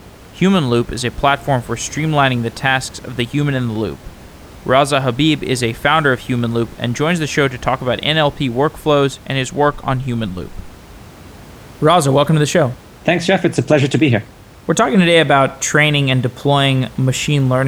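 Speech recording with no technical faults; the room's background noise sits about 23 dB below the speech and belongs to the recording itself, not to the system.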